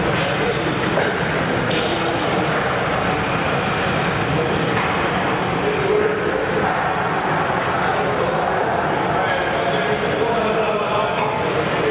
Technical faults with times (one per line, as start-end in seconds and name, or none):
none